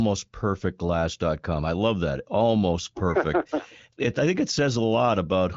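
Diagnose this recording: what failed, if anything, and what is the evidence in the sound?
Nothing failed: the speech carries no audible defect at any stage, and its spectrum stops at about 7.4 kHz with only faint coding texture, which points to a wideband AMR-WB (HD Voice) link running at a mid-to-high rate rather than any breakdown.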